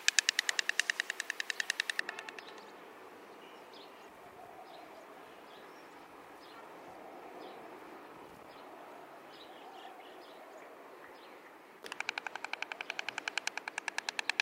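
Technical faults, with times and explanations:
0.0–2.0 s, pre-emphasis left on: J.17 treble boost never undone, highs about 11 dB hot at 10 kHz; thin, sibilant; spectrogram shows bright upper bands.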